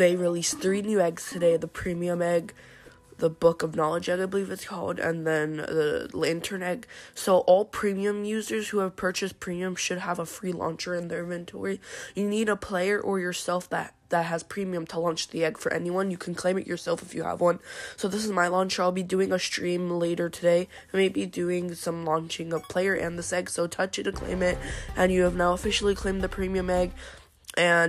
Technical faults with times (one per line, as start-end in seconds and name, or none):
none